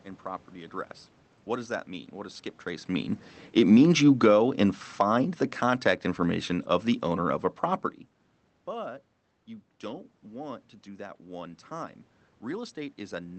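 From 0.22 to 2.94 s there's automatic gain rising: the gain control decided the input was too quiet and nudged its gain up by about 4 dB over nearly three seconds, so the voice and the room noise behind it swell together rather than the voice alone getting closer.

Then from 3.43 to 7.55 s you get automatic gain falling, the opposite correction. Finding the input too loud, or its background noise too strong, the control pulls gain down by about 7 dB over roughly four seconds, so the speech starts loud and sinks gradually, with the background sinking right along with it.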